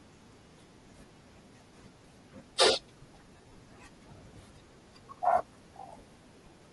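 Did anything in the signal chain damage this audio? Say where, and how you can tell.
Yes. The codec stage shows damage throughout. The speech has a breathy, grainy edge and a noisy upper band. That fits Bluetooth LC3 compression, likely at around 48 kbps with 7.5 ms frames, where the encoder drops upper-spectrum detail and fills it with noise.

The radio link fails from 3.34 to 3.55 s. Lost LE Audio frames smear the speech into noisy patches there. The gaps total about 135 ms, the longest around 40 ms. The decoder repeats the last spectrum with random signs to conceal them.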